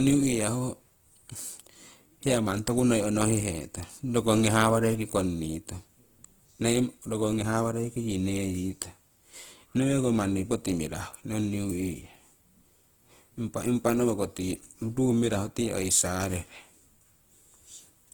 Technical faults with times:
0.00-18.14 Opus compression

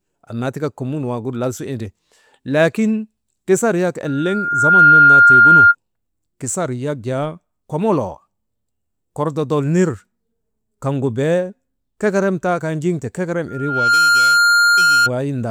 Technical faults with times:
4.06-5.75 loudspeaker feedback squeal
13.48-15.11 loudspeaker feedback squeal

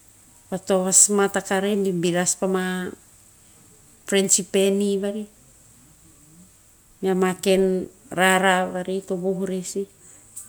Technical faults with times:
none

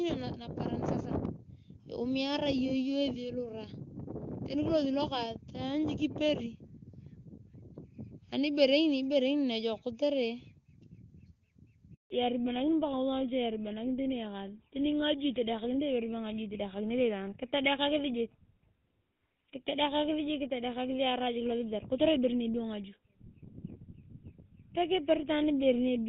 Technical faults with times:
11.94-12.10 handover gap
12.10-26.09 fallback to narrowband

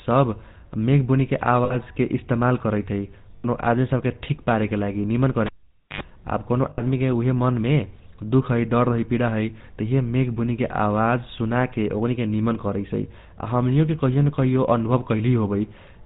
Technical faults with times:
0.00-16.05 GSM full-rate codec
1.64-1.77 lost GSM frames
3.36-3.45 lost GSM frames
5.46-6.01 cable pulled and plugged in
6.70-6.81 lost GSM frames

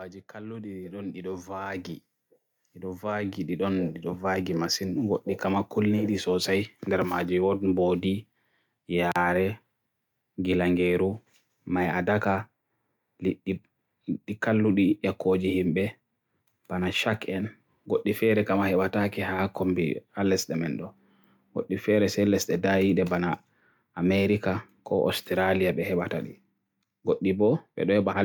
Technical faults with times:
0.31-5.08 automatic gain rising

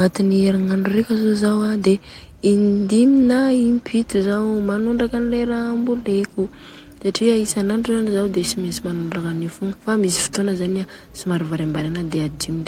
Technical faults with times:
0.61 lost packet rebuilt from error correction
8.39-8.41 lost packet rebuilt from error correction

